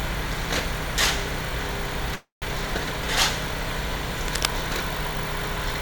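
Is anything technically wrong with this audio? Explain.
Yes, there are two faults.

From 2.15 to 2.44 s there is a call audio freeze. The sound stops moving forward and the last moment is stretched into a fading buzz or hiss that drops to silence for about 150 ms. The audio then resumes where it left off, now running 265 ms late, with nothing lost. The likely cause is delayed packets draining the jitter buffer. On a spectrogram, frozen horizontal bands fade to an empty strip. The waveform shows a decaying tail and then a flat line.

From 4.28 to 4.49 s there is cable scratch noise. Dense, uneven crackling and rustling sits on top of the sound at roughly the same loudness as the sound itself. This likely comes from a worn cable, connector or control being moved, so its contact resistance jumps rapidly. On a spectrogram it shows as ragged broadband vertical streaks. The waveform has jagged, irregular spikes across that fifth of a second.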